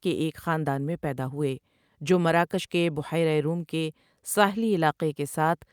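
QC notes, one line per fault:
No faults were found in this speech clip. Nothing in it calls for a QC entry.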